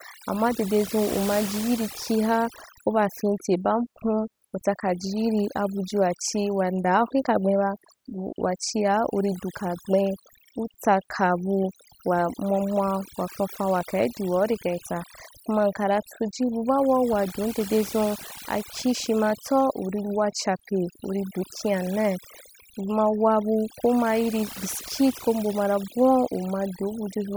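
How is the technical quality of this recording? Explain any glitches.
The recording suffers from overdone noise removal, present from start to finish of the speech. A noise reduction stage was pushed too hard, so any frequency band sitting close to the estimated noise floor gets pulled far down or switched off entirely, and the softer parts of the voice are caught along with the noise. The pauses drop and break up into twinkling, chirpy specks.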